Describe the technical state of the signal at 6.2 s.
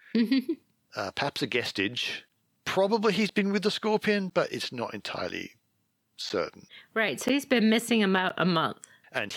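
Periodic USB or driver dropouts run from 2.29 s to 9.31 s, just after "uh perhaps a guestage", so 6.2 s falls inside them. Once a second the audio path stalls and roughly 10 ms of signal is replaced by silence, heard as regular ticks through the speech.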